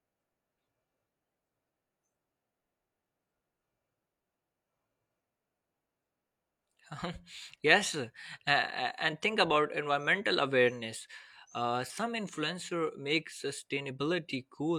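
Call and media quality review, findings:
Nothing stood out on listening to this speech recording.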